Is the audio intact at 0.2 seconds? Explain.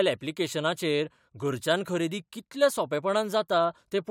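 Yes, the speech at 0.2 seconds plays through intact, with no fault at that moment.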